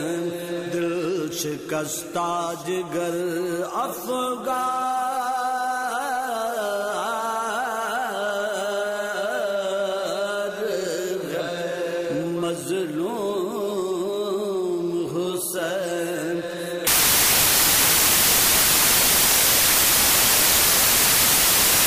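Samples built from the wrong bytes take over at 16.87 s and last to the end of the clip. The reader misassembles each sample's bytes, so fast-changing low bits land in the most significant position, turning the sound into loud, harsh broadband noise.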